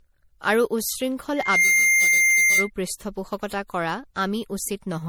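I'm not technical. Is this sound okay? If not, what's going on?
No. From 1.36 s to 2.70 s there is a loudspeaker feedback squeal. A microphone picked up the speaker it was feeding, and the sound looped round and grew. A single high whistle near 2.1 kHz swells up within about a third of a second and sits well above the speech.

All the way through, the speech sounds swirly, hollow and smeared, and sharp starts of sounds are blurred. This is generation loss, likely from saving the audio as an MP3 about four times over, with each save adding its own damage.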